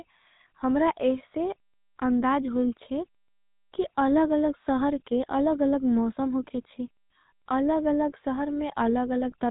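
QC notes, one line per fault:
Throughout, GSM full-rate codec: the speech has a buzzy, gravelly grit from pulse-driven vocal-tract modelling at about 13 kbps, and nothing gets through above roughly 3.8 kHz.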